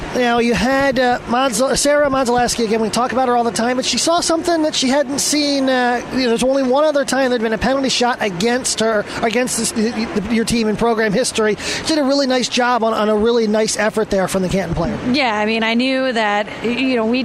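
Nothing in this audio stands out as a technical fault, so there's nothing here to pin to a time or trace back to a cause.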